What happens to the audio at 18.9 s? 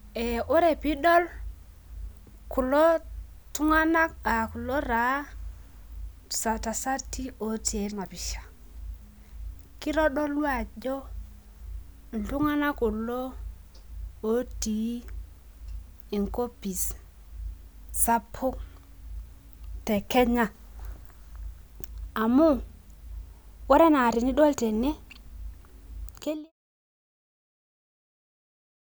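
Nothing goes wrong at 18.9 s; the speech there is intact, with no dropout, click or other fault.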